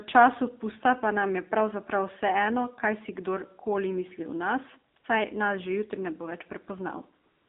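From start to finish the speech passes through an AMR narrowband mobile codec. The line band runs from 250 Hz to 3.7 kHz, so nothing above it survives. The codec models the vocal tract and drives it with a few pulses per frame. At this level the damage is plainly audible. The voice sounds buzzy and synthetic, which fits a low bitrate around 7.4 kbps.

AMR comfort noise appears from 4.94 to 4.96 s, for 20 ms, and again from 4.98 to 5.04 s, for 60 ms. It returns at 7.24 s and runs to the end of the clip, about 255 ms. In each gap the phone sent no speech frames, so the receiver filled the gap with synthetic noise built from a rough level and spectrum. The real background drops out and a smooth, steady hiss switches in.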